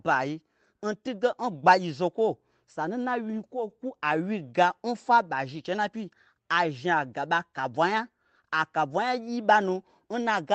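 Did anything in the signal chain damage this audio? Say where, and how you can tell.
No, nothing in the chain damaged this speech: it shows the normal character of a WebRTC call path, with the top end stopping at about 8 kHz and a texture that fits an Opus encode at around 24 kbps.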